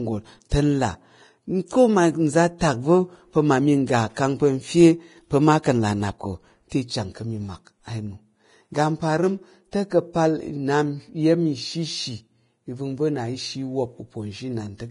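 Hissy, grainy speech with roughened tones and nothing above 10.5 kHz, which points to heavy Vorbis compression, likely at a low bitrate around 29 kbps. Brief hiss smears in ahead of sharp attacks at 0.49–0.51 s, 2.58–2.61 s and 6.69–6.72 s. This is pre-echo, where block-wide quantisation noise spreads 20 to 24 ms before each onset.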